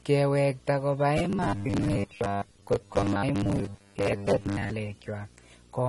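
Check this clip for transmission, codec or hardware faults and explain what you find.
Three faults stand out in this speech recording: a display buzz running the whole way through, layered lossy-codec damage, and a stretch of robotic sound in the middle.

Video or display buzz is present from start to finish. A screen or video cable is coupling into the audio path, producing a steady buzz at 59.94 Hz, the field rate of the picture, sitting roughly 25 dB below the speech, with hash spread above it and a thin whine at the 15.7 kHz line rate. On a spectrogram this appears as a fixed line at 59.94 Hz with its harmonics stacked above it, plus a faint horizontal thread near 15.7 kHz that persists through pauses.

Transcoding between lossy codecs affects the entire clip. The sound combines two kinds of damage: swirly, watery treble alongside smeared, pre-echoed consonants. The likely cause is an MP3 encode at a low rate around 48 kbit/s, later re-encoded as AAC-LC at about 32 kbit/s. 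The second encoder spends its scarce bits on the first one's artefacts, so both sets survive. A spectrogram shows a hard ceiling at 12.1 kHz, with patchy, blocky holes below it.

Robotic sound from repeated short buffers occurs from 1.18 to 4.77 s. Here the speech turns into a rigid metallic drone pinned at 100 Hz, though it still loosely tracks the syllables. The likely cause is audio arriving too late, so the playback software loops the last block of about 10 ms and skips most of the real signal. A waveform shows identical 10 ms segments repeating, and a spectrogram shows evenly spaced 100 Hz harmonics replacing the natural pitch contour.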